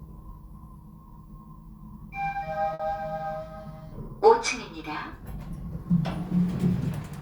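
At 2.73 s there is a burst of packet loss lasting until about 2.81 s. A short run of audio, which points to a few consecutive packets, never reached the player in time. The receiver covered the hole by extending the last sound it had, for about 60 ms, and turned it down as it went. This is heard as a brief smeared, fading hold. The sound then jumps ahead, with about 60 ms of the original audio skipped.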